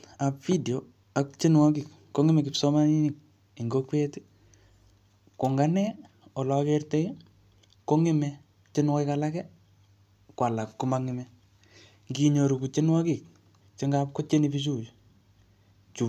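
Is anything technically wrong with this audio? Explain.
No, nothing is technically wrong with this audio.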